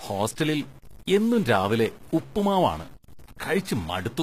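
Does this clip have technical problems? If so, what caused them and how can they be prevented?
Yes. Throughout the clip there is stuck bit distortion, likely from a broken data line or converter that holds one bit of every sample at a fixed value. About half the sample values are then off by that bit's weight, in a pattern that follows the waveform, so the speech carries added distortion. Near-silent stretches fill with noise because the bit also flips with the sign of small values. Checking the converter and its wiring with a test signal before recording would catch this.

The clip also shows plainly audible HE-AAC compression, likely from encoding at a low rate; the sound fits roughly 20 kbps. The codec spends its bits on the lower spectrum and rebuilds the treble by copying lower bands upward under a coarse envelope. The result is treble that is not the original, with harmonics that do not line up across the crossover and s sounds that turn gritty, metallic or lispy. 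Nothing is present above 14.9 kHz. Encoding at a higher bitrate, or in a lossless format, would prevent this.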